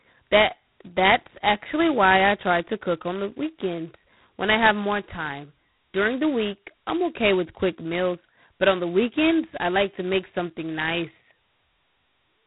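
Throughout the speech, G.726 ADPCM coding is audible. Each sample carries only a coarse difference from a predicted value. The heavy damage fits 16 kbit/s. A harsh, rasping hiss rides on the speech and tracks its loudness. Nothing passes above 3.9 kHz.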